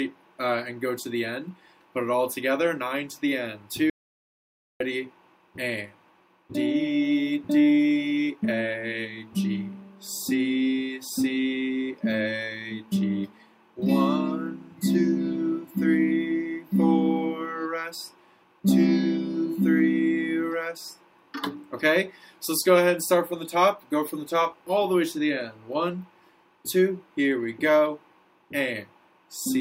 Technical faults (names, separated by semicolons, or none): audio dropout to silence